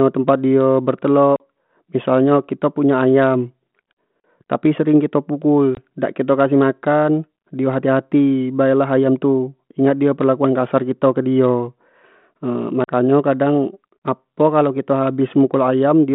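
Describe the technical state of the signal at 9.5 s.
At 9.5 s the signal is intact, carrying the speech through the normal 32 kbit/s G.726 ADPCM telephone path with its usual narrow line band and nothing that counts as a fault.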